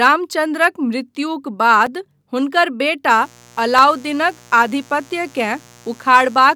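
At 1.86 s the speech drops out for about 5 ms, a block of digital silence where the output got zeros instead of audio, most likely because the buffer wasn't filled in time. There's no fade in or out, so it comes across as a small tick rather than a gap you'd notice as missing sound. The same thing happens again at 3.79 s, this time only about 1.5 ms long, which fits a 64-sample block going empty. It's heard as a tick too.

From 3.06 s to the end there's a mains buzz at 60 Hz. The sharp switching spikes from something like a dimmer or rectifier, or a missing shield, land twice per mains cycle, so the harmonics climb well up into the kilohertz range. It sits roughly 30 dB under the speech and sounds like a steady, raspy buzz running under everything.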